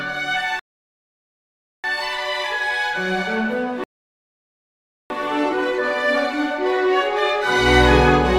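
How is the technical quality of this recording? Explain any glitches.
The recording is marred by two rebuffering stalls. Playback ran out of downloaded audio and waited, so the sound cuts to silence at 0.59 to 1.84 s and 3.84 to 5.10 s, then resumes seamlessly, adding about 1.2 and 1.3 s.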